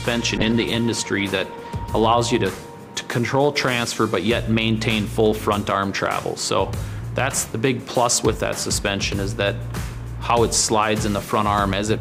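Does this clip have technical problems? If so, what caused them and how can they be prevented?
Yes. A call bitrate drop runs from 0.38 s to 2.01 s. The sound turns coarse and muffled, and the high frequencies are cut off for about 1.56 s before it recovers. The call's bandwidth estimate fell, so the encoder was told to spend far fewer bits. The sound fits a fall from around 128 kbps to roughly 19 kbps. Prevent it by stabilising the network link and reserving bandwidth for the call.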